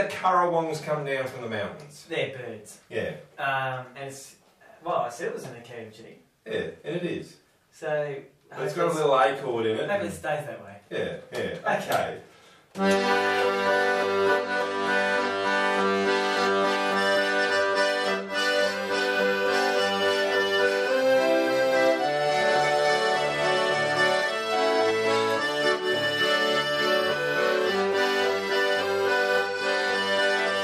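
From 20.87 to 24.91 s, a doubled audio track appears, most likely from a second, slower capture path or an edit leaving two copies out of step. A full-band copy trails by roughly 150 ms, around 5 dB quieter, dry and uncoloured, switching in and out abruptly.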